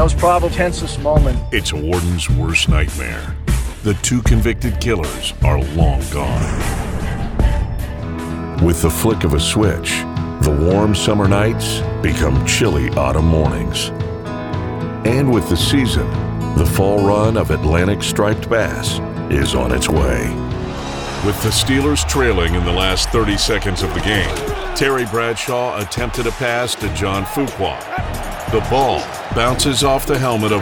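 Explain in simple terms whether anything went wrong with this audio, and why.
Yes, two things went wrong. At 0.51 to 0.53 s there is a skip ahead. Nearly half a second of sound was dropped, and playback jumps straight on.

From 1.07 to 4.58 s there is a jitter buffer speed-up. The receiver had too much sound waiting, so it snipped out tiny pieces. The sound plays about 4% faster without changing pitch.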